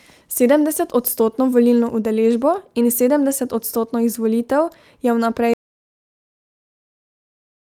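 At 5.54 s the speech cuts out abruptly and never returns. From there to the end, about 2.1 s, the audio is silent. No room tone or background hiss survives. This is an audio dropout to silence. The input signal was likely lost, through a disconnected device, a failed link or a mute. The recorder kept writing silence. Whatever was said after 5.54 s is gone.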